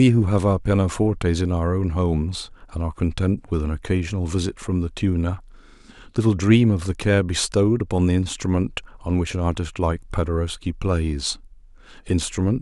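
No technical faults can be heard anywhere in the recording.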